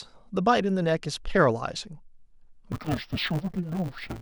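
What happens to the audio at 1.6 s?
Nothing goes wrong at 1.6 s; the speech there plays through intact, with no dropout, click or distortion.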